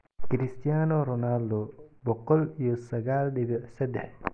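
A short recording of speech, with no technical fault to be heard anywhere in it. Nothing in the audio calls for a time or a cause to be noted.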